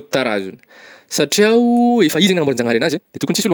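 A time-stretched section runs from 2.04 s to the end of this speech clip, right after "satria o". At that point the pace abruptly doubles while the pitch stays where it was, so the audio turns rushed. That combination is likely the work of software squeezing the passage to half its length, keeping the pitch intact by discarding short slices of the waveform and butting the remaining pieces together.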